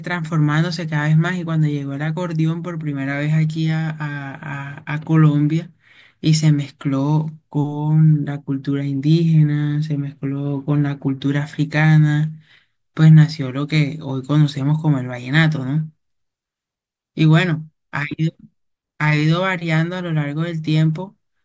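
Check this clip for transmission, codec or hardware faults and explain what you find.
I hear nothing wrong anywhere in this speech.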